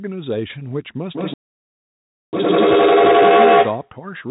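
At 1.15 s a feedback echo between two devices sets in and runs to 3.97 s. Two endpoints in the same room are on the call, and each microphone picks up the other's loudspeaker. Neither echo canceller removes sound its own device did not play. The speech returns roughly every 150 ms, thinner and more resonant on each pass, and the repeats build instead of decaying, peaking about 11 dB above the direct speech.

From 1.34 s to 2.33 s there is a playback stall. The output drops to silence for about 0.99 s in mid-utterance. The likely cause is a jitter buffer that ran dry or a blocked playback thread. The sound then resumes at the point where it broke off rather than skipping ahead, so the backlog from the gap is still waiting to be played.

A time-compressed catch-up clears that backlog from 2.33 s to 3.31 s. The player drops short segments and cross-fades the joins, running the speech at 2× its normal rate while holding the pitch. 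It sounds hurried. The recirculating echo is still sounding under this passage, and everything stays within the narrow telephone band of the G.711 path, with nothing above 4 kHz.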